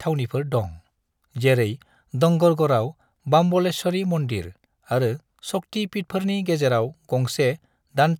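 Speech recording; no technical faults detected anywhere in the clip.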